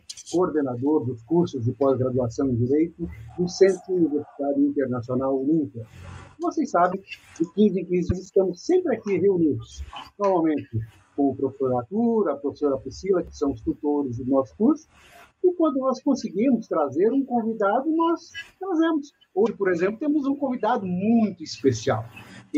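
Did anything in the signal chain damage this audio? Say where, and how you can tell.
Yes: a broken MP3 bit reservoir at 6.91–6.94, 8.09–8.12 and 19.45–19.48 s, where 30 ms glitches make the sound jump ahead. These are likely from MP3 frames dropped in storage, so the following frames decode borrowed bits from the wrong data.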